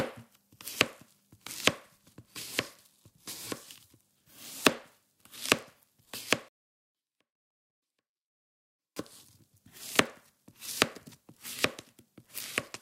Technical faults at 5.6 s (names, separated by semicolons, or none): none